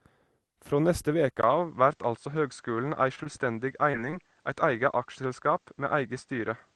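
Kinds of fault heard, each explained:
Input switched to a poorer device: at 1.41 s the sound briefly drops out, then turns duller with nothing above 8.8 kHz, likely another microphone taking over.
Short stall from a late packet: around 3.15 s a packet arrives late, so the last sound gets held about 20 ms too long before carrying on.
Short concealed packet loss: at 3.23 s roughly 20 ms never arrives, and the receiver smears the previous sound across the hole, giving a brief wobble.
Repeated packet loss (robotic sound): between 3.91 and 4.30 s four short gaps get patched in quick succession, making that stretch choppy.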